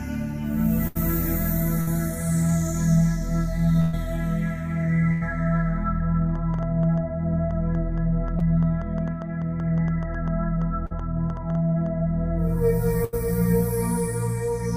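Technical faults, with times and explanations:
0.87–0.97 s, 1.81–1.89 s, 3.81–3.95 s, 5.13–5.23 s and 13.05–13.15 s: burst of packet loss. Each time a run of audio failed to arrive in time, and the receiver stretched the last sound it had, letting it fade over the gap. The result is a held, dimming smear where the sound should move on. Playback then jumps ahead, skipping about 60 to 120 ms, longest at 3.81 s.
6.36–11.87 s: train of clicks. Around thirty sharp, similar pops land at roughly five per second, unevenly spaced. They stand clearly above the sound, peaking a few decibels over it, and keep ticking through quieter moments. Such a run of near-identical impulses is most likely interference from nearby equipment or a faulty connection or power supply breaking into the signal path for those five and a half seconds.
8.39–8.42 s and 10.86–10.93 s: short concealed packet loss. Brief holes of about 20 ms and 40 ms opened in the stream, and the receiver filled each by extending the preceding sound before blending back into the real audio. 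These register as a quick smear or small wobble rather than a clear gap. Both fall inside the click train, so they can be mistaken for part of it.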